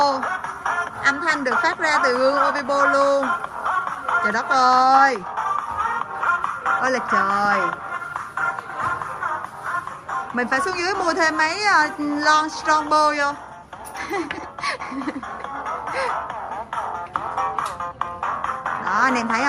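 No technical faults are audible anywhere in this recording.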